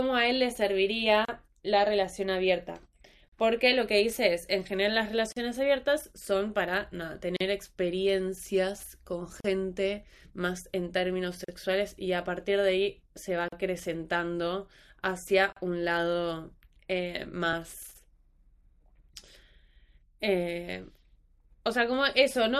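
Short holes of silence cut into this speech recording every 2.0 seconds, at 1.25, 3.28, 5.32, 7.36, 9.40, 11.44, 13.48 and 15.52 s. The first lasts about 33 ms and the rest 40 ms each, with smeared edges, after which the sound resumes exactly where it broke off. This regular pattern is a gap at a join of encoded pieces. The audio was encoded in two-second segments and spliced without trimming, so each segment's encoder start-up silence and final-frame padding remain at every seam. At 17.53 s there is a single tiny click, a repeated buffer. The output device ran short of fresh audio and replayed its last block, about 1.3 ms long, which fits a 64-sample buffer. That block sounds twice in a row with a hard join. Because the block is so small, the result is a brief tick rather than an audible stutter, and almost nothing of the sound is lost.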